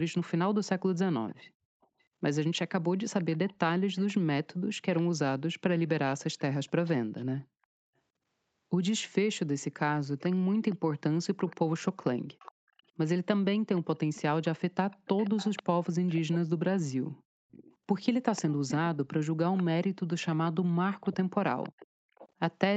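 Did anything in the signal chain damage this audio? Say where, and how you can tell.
Yes. A faint, delayed copy of the speech trails it by about 0.49 s from 1.28 to 5.02 s, 6.38 to 7.25 s, 10.19 to 16.37 s, and 17.51 s to the end, growing from roughly 25 dB below the speech to about 15 dB below in the last stretch. This is echo leak at the call-processing stage, likely from a far end on loudspeaker whose echo canceller let the replayed sound back into its microphone.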